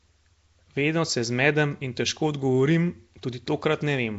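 Throughout, the speech sounds rough and hissy, smeared and underwater, with nothing above 7.7 kHz. Likely Nellymoser compression, with noise filling starved bands, which fits about 32 kbps.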